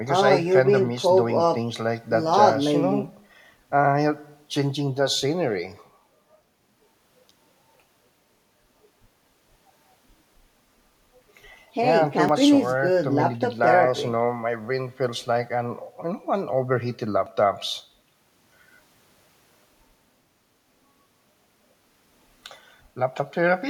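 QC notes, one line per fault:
2.33 s, 12.29 s and 17.26 s, audio missing between chunks: the speech jumps forward abruptly at each point, a tiny skip where a sliver of sound, about 20 ms, vanishes and the two sides butt together with no gap, leaving a slight jolt in the flow. The cause is likely a recorder or processor handling audio in 5 s blocks and dropping a fragment at the handover, which fits the skips falling on 5 s multiples apart.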